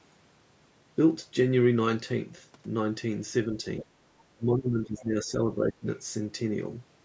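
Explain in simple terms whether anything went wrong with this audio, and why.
Faint scraps of the other side's voice leaking through can be heard from 3.79 to 3.84 seconds. They sit well below the talker. This is likely because the device played the far end on its loudspeaker, and the echo canceller missed a little of it.

Speech suppressed in double talk follows. From 3.82 to 3.97 seconds the talker almost disappears. From 4.34 to 5.86 seconds the voice dips more gently. Both sides were likely talking at once, so the canceller turned everything down.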